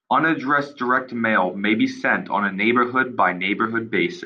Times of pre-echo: none

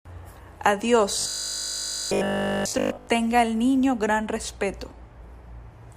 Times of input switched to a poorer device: none

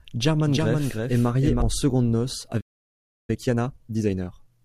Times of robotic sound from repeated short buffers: none

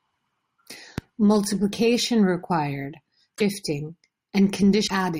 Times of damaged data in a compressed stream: 3.33-3.41, 4.84-4.91

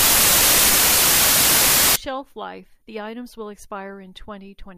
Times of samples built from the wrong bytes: 0.00-1.96

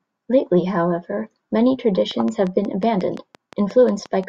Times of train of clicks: 2.11-4.24

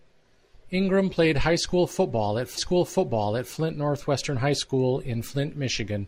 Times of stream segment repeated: 2.54-3.53

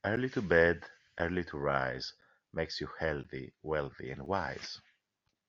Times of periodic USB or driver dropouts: 0.16-5.29

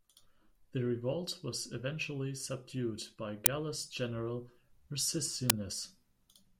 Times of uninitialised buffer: 3.46, 5.50

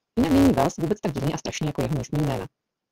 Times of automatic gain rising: none

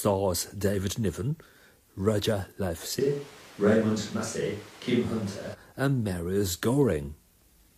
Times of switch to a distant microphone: 3.01-5.53

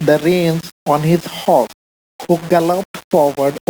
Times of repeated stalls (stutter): 1.71-2.76

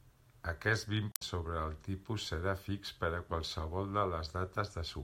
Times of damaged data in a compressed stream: 1.09-1.22

